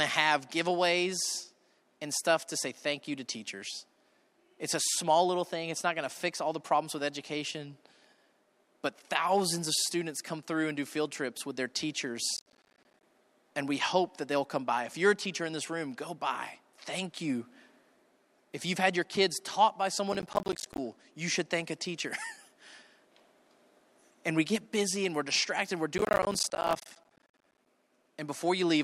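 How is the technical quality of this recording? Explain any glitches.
The recording has three bursts of processor overload crackle: at 12.37–13.03 s, at 20.13–20.78 s between "your kids taught by" and "you should thank a", and at 25.98–27.67 s right after "and we're distracted we're". In each burst the processor misses dozens of short buffer deadlines, which fits buffers of around 10 ms. Each miss leaves a hard-edged silent gap, and together the gaps sound like gritty tearing over the speech. A single dropout would be one clean hole, but this is dense, rapid crackle that stops as soon as the load passes.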